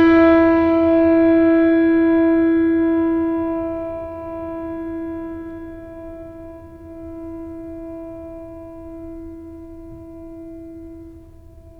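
The music carries a rough, metallic edge from start to finish that falls away in the quiet moments, most noticeable on higher-pitched material. It is periodic clock jitter: interference wobbling the converter's clock at around 1.5 kHz, spraying sidebands at that spacing around every component.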